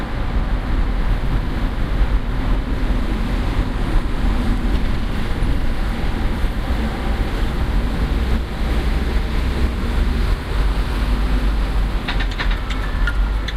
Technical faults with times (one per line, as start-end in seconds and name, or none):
0.00-13.56 clock drift between sender and receiver
0.09-13.53 repeated timing corrections